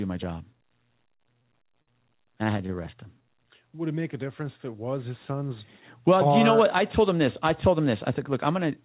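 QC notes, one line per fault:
1.16–2.72 s, repeated stalls (stutter): packets arrived late or more slowly than playback, so the jitter buffer ran dry nine times in this span. Each time the receiver stretched the last sound to bridge the wait, filling 143 ms in total, about 9% of the span, with the longest gap 52 ms. Nothing is lost, but the audio hitches and drags. On a spectrogram, brief flat, smeared stretches repeat the preceding spectrum; the waveform shows short repeated or fading segments at each hitch.
2.95–3.32 s, jitter buffer slow-down: the buffer was low or had just raised its target delay, so the receiver rebuilt its reserve by repeating single pitch periods and pause fragments, adding 47 ms and running this stretch at 89% speed with pitch unchanged. Sounds are drawn out. On the waveform, the periodic cycles repeat near-identically and the section is visibly stretched. On the spectrogram, the harmonics keep the same spacing but run longer, all sitting below 4 kHz because of the G.711 call path.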